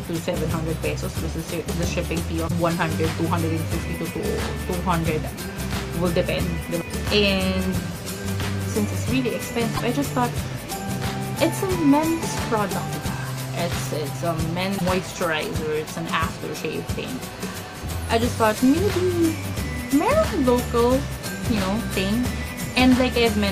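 Three short glitches stand out, at 2.47–2.51 s, 9.76–9.80 s and 14.77–14.82 s. At each one the audio lurches forward and about 40 ms comes out as garbage. That's likely a broken MP3 bit reservoir: frames were lost, so the decoder went back for borrowed bits and read another frame's bytes. The garbage lasting under two frame lengths fits ordinary 26 ms MP3 frames.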